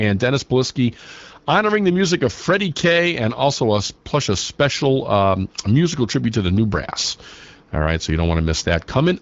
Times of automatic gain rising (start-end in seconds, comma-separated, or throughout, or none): none